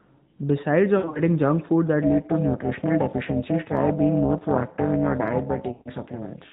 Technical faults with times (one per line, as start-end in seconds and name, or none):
0.98-1.20 lost AMR speech frames
2.02-6.53 overlap-add ripple
5.72-5.88 lost AMR speech frames